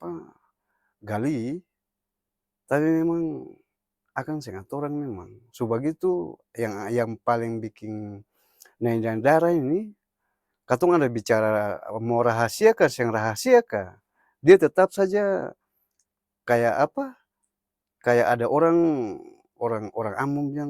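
Speech with no audible faults.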